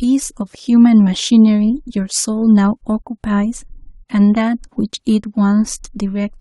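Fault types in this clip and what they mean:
Listening closely to the speech, nothing stood out as a technical problem at any point.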